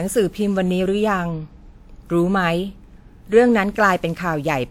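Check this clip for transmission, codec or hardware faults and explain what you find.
The speech shows a codec fault throughout the clip: generation loss. It sounds swirly, smeared and hollow, with blurred consonant attacks and no content above 20 kHz. The likely cause is roughly seven successive lossy encodes, consistent with WMA at around 128 kbit/s, each requantising on a shifted frame grid so noise and spectral holes accumulate.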